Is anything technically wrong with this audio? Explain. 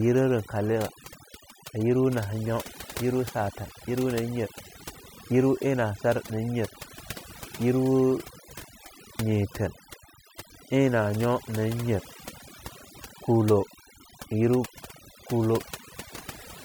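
Yes. Throughout, there's overdone noise removal: bands near the noise estimate get gated almost to nothing, leaving near-silent gaps with twinkly specks and quiet parts of the speech removed along with them.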